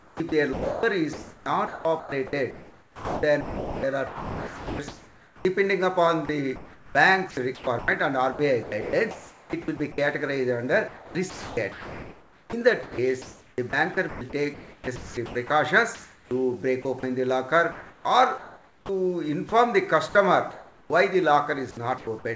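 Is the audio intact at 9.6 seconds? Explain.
No. The moment falls inside a choppy stretch from about 6.26 to 9.98 s, where sound chopped by the voice detector breaks up the audio. Roughly 1.5 s in total is replaced by smooth synthetic comfort noise, so edges and quieter passages drop out. The likely cause is the sender's detector toggling transmission repeatedly. Unlike packet-loss dropouts, the gaps are filled with steady noise rather than silence, clicks or repeated fragments.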